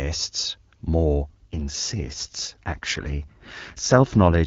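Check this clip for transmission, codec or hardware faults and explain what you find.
One transmission fault appears: an AMR rate drop. Before it, the AMR wideband (HD Voice) codec sounds clean. From 1.42 s to 4.46 s the speech turns rougher and more synthetic. The bandwidth stays the same and nothing drops out. This fits the link switching from 23.85 to 8.85 kbit/s, giving bits to error protection instead of detail.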